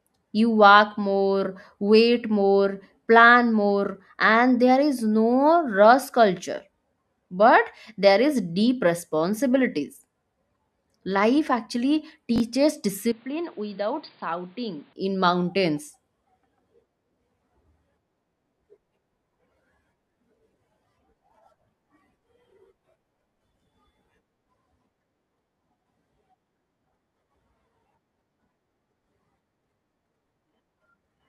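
At 12.36 to 12.40 s a brief jumbled stutter cuts into the speech. It is chunks out of order: one 20 ms chunk played a chunk late, so nothing is lost, but the order is wrong.

From 13.12 to 14.93 s the speech turns dull and boxy, with nothing above 4.8 kHz, about 10 dB quieter, and with faint new background noise. There is no gap at the change. The likely cause is an input switched to a poorer device.

A longer garble follows at 22.44 to 22.52 s, where a 20 ms chunk arrived three chunks late.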